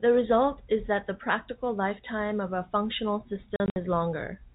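From 3.56 to 3.76 s the speech breaks up with packet loss filled with silence. About 120 ms of audio drops out in several hard-edged gaps, the longest 60 ms, which fits losing roughly six 20 ms packets. Each gap sits within the 4 kHz telephone band of the G.711 path.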